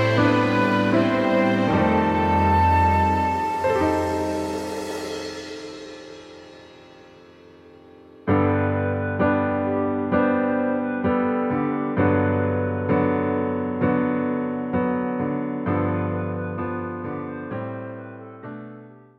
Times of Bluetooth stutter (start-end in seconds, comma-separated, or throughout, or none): none